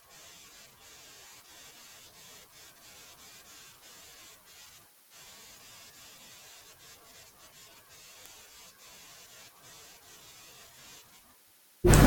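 At 8.26 s there's a single bit error spike, one sharp tick that has nothing to do with the speech around it. A bit got flipped somewhere in memory or on a digital link, so the sample value jumps by a power of two and snaps straight back. It peaks at about -20 dBFS, and its brevity fits just one corrupted sample, which is why it sprays energy right across the spectrum as a dry click.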